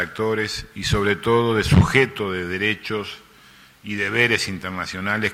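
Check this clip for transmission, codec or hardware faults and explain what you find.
Nothing in the signal points to a transmission, codec or hardware problem; the audio stays continuous and steady throughout, with no audible disruption to its level, timing or tonal balance.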